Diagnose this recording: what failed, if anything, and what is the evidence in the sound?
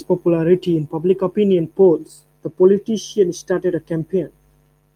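Nothing failed; no faults heard.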